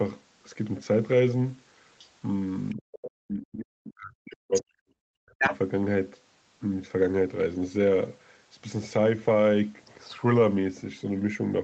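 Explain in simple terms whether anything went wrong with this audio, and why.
Yes, two related things went wrong. The first is the other side's voice leaking through: a second voice, not the talker's, turns up in short scraps at about 1.98, 2.69, 2.92, 4.54 and 5.39 seconds. It starts faint and grows, and by 5.39 it is about as loud as the talker. This likely happened because the other person was playing through a loudspeaker and the echo canceller didn't fully remove them. Unlike background noise, it is clearly another voice.

The second is speech suppressed in double talk. The talker's own voice drops away briefly around 2.74 to 2.83 seconds, then much more deeply for about two seconds, from 3.25 to 5.51. The leaking voice is present during both drops, which points to both people speaking at once. The likely cause is the echo canceller turning everything down because it couldn't separate the talker from the echo. 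A network dropout would not line up with the other person talking like this.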